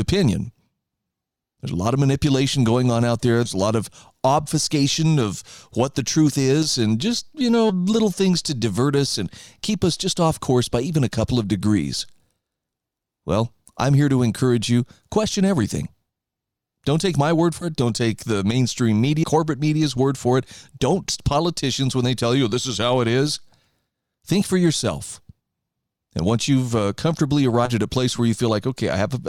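At 3.45–3.49, 7.69–7.73, 17.61–17.66, 19.23, 21.09–21.13 and 27.65–27.70 s the speech leaps forward, losing roughly a tenth of a second each time, nearer 70 ms at 19.23 and 27.65 and nearer a fifth at 21.09. These are compressed frames skipped: whole blocks of encoded audio never decoded, so time jumps in steps that fit 20 ms frames. Unlike a gap or dropout there is no silence.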